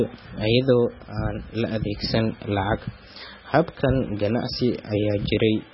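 MP3 compression runs throughout the clip and is likely the cause of the heavy damage heard. Nothing survives above 5.6 kHz, which fits a starved bitrate near 16 kbps. Weak frequency lines drop in and out between frames, giving the speech a watery, swirling texture.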